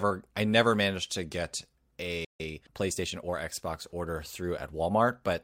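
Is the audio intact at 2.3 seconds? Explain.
No. At 2.3 seconds the speech is caught inside a playback stall running from 2.25 to 2.40 s, a gap of about 150 ms. The sound halts mid-flow and then resumes, most likely because the player ran short of data or its output thread was held up. On a waveform this shows as a flat, silent stretch cutting abruptly into the signal; a spectrogram shows a clean vertical blank band across all frequencies.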